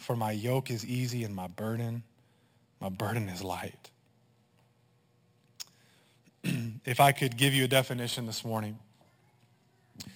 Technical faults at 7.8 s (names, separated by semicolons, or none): imaging from sample-and-hold upsampling